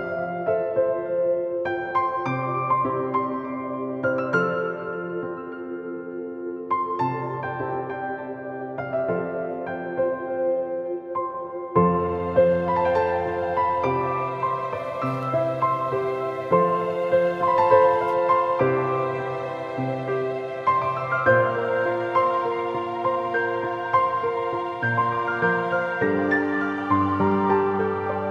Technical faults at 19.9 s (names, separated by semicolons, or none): none